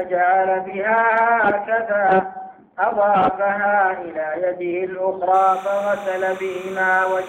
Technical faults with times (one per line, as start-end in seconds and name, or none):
5.34-7.28 timecode bleed